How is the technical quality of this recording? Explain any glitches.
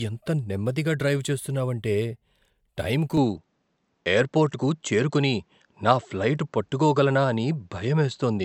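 The recording has two problems: a smeared, hollow coding sound throughout, and a drop in quality from 3.17 s to the end.

Generation loss runs through the whole clip. The speech has likely been through lossy coding about four times, which fits repeated MP3 encoding at around 128 kbit/s. Each pass quantises on a shifted frame grid, so the errors stack. The band still reaches about 20.1 kHz, yet consonant attacks blur and the sound has a swirly, hollow quality that a single encode at that rate would not give.

Input switched to a poorer device at 3.17 s, lasting to the end. The recording changes abruptly, with no gap, to a narrower-band input, likely another microphone or a headset's call profile. From that moment nothing comes through above about 7.9 kHz, so the speech turns dull and boxy. The level shifts by about 5 dB, and a new background noise appears, sitting about 50 dB below the speech.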